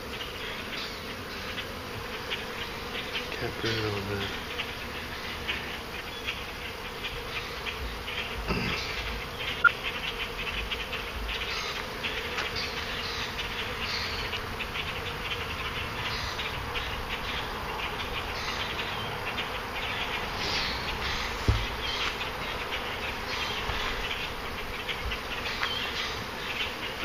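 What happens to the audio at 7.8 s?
At 7.83 s the audio lurches forward, as though a sliver of sound has gone missing. That is a case of compressed frames skipped: whole frames of the encoded stream were either absent or rejected by the decoder as corrupt, so playback jumps ahead by roughly 50 ms.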